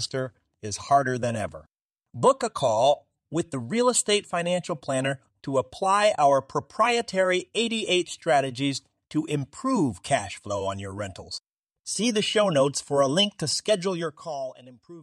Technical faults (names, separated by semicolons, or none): zipper noise